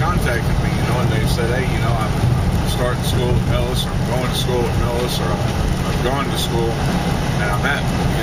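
Nothing in the audio stood out as a technical fault on listening.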